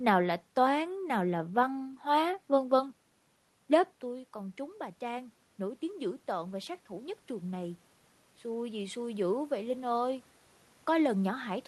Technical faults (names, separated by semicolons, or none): automatic gain rising